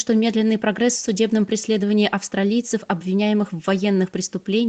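A speech recording with nothing technically wrong in it. It has the character of a normal call, with the bass gently trimmed and nothing above about 8 kHz, which fits a wideband call codec working as intended.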